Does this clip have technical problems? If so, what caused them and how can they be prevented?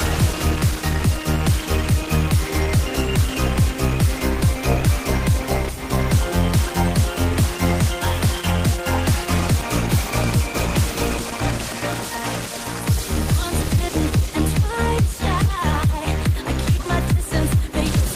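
No, nothing in the recording points to a capture, transmission or processing fault, so there is no cause to trace and nothing to prevent.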